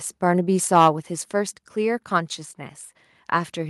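Microphone overload at 0.75 to 0.88 s in this speech clip adds a harsh, crackling edge as the peaks are flattened, likely because the input drove the converter about 4 dB past its limit, squaring off roughly 7 percent of samples. A microphone volume stepped down at 1.02 s drops the voice and background abruptly by about 3 dB, likely the call software cutting the device's input gain in one step after that distorted peak.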